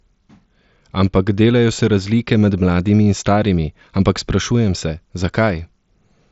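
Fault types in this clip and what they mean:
No faults are present in this speech recording. It passes through a Bluetooth mSBC headset link, so the sound stops at about 7.7 kHz, with a light graininess on the louder passages.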